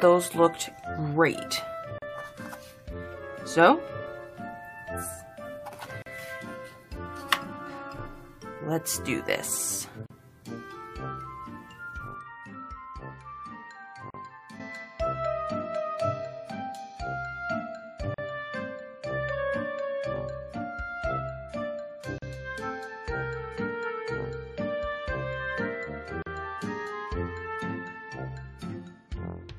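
Short gaps of about 40 ms cut into the sound at 1.98, 6.02, 10.06, 14.10, 18.14, 22.18 and 26.22 s, every 4 s. It's a gap at a join of encoded pieces, where separately encoded chunks kept their encoder delay and padding.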